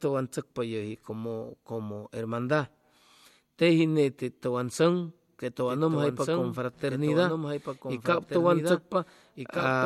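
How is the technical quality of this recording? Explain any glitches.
There's one real problem here, and it sits in the back part of the clip. From 5.68 s to the end, you get a doubled audio track: a second, full-band copy of the speech running roughly a second and a half behind the original, a few dB quieter. It cuts in abruptly, with no decay or room colour, so it sounds like two overlapping takes rather than an echo. The likely cause is a second capture path or a misaligned edit layering the audio twice.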